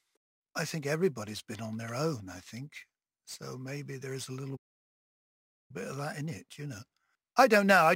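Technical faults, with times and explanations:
Throughout: sample clock jitter. The converter's clock wanders by roughly 7 microseconds, so each speech sample is taken a little early or late. The timing error turns into a hiss and roughness, roughly 25 dB below the signal, that grows on loud passages and sharp, bright sounds, where the waveform changes fastest, and disappears in pauses. That dependence on level and brightness separates it from steady background noise or dither, which stay constant in silence.
4.56 to 5.71 s: playback stall. After "there is a little" the output goes completely silent for about 1.13 s, then resumes with "bit of that in", picking up exactly where it stopped. The likely cause is the player running short of data or its thread being blocked until it could catch up. Because nothing is lost, this is a pause in delivery rather than a dropout, which would skip material.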